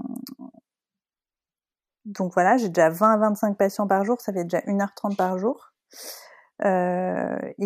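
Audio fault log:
No faults in this speech recording.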